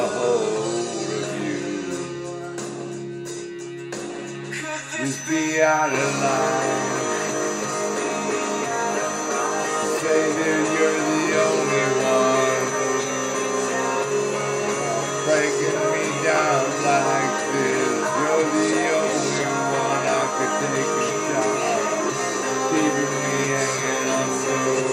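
A loudspeaker-to-microphone loop likely sitting just short of runaway gain leaves a feedback whistle: a steady 6.1 kHz tone ringing about 15 dB below the sound from 4.99 s to the end, never growing into a howl, only slowly swelling and fading. At 13.65 s, dropped samples, likely a couple lost from the stream, make the waveform jump straight to a later value, producing a single sharp click too brief to remove any audible sound.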